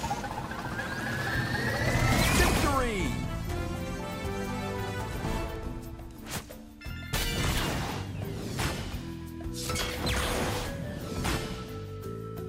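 Periodic USB or driver dropouts run from about 0.44 s to 11.7 s, heard as roughly ten small ticks spaced a steady 1.024 s apart through the audio. Each tick is a gap of a couple of milliseconds where the signal drops briefly to silence, because something on the system repeatedly stalls the USB link or the audio driver on a fixed schedule. The interface misses its deadline and that slice of audio never arrives.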